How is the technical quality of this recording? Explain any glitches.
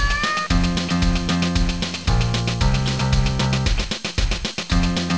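One brief glitch stands out: at 2.04 s the sound drops out for about 20 ms and steady noise takes its place. This is most likely sound dropped by the voice detector. The sending side judged that stretch to be background and stopped transmitting, and the receiver filled the gap with comfort noise. The audio resumes once the detector triggers again.

What distinguishes it from a lost packet is the texture of the gap. Packet-loss concealment would smear or repeat the surrounding sound, and a hard dropout would fall to digital silence. Here the gap holds a flat, featureless hiss. The clip passed through a call path with nothing above 8 kHz, which fits a wideband codec such as G.722.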